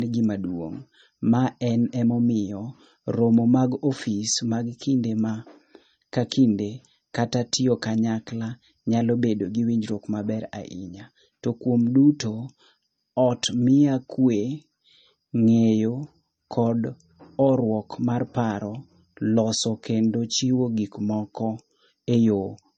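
From start to finish the speech carries a hard ceiling at 8.4 kHz and a layered quality, pointing to transcoding between lossy codecs. The likely chain is a low-rate MP3 stage, around 32 kbit/s, re-encoded to HE-AAC at around 48 kbit/s. The second encoder spends its bits reproducing the first one's artefacts while adding its own, so two distinct artefact textures sit on top of each other, and the lowest band limit in the chain persists.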